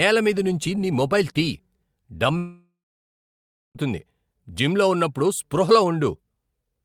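At 2.37 s the speech breaks off and does not return until 3.77 s, a gap of about 1.4 s that sounds like a long network dropout. The final sound before the break is drawn out into a buzzy or hissy tail that fades, leaving about a second of silence. This is most likely a stream interruption. Unlike a short packet-loss glitch, the concealment gives up entirely, and the speech resumes further on with the missing stretch skipped rather than delayed.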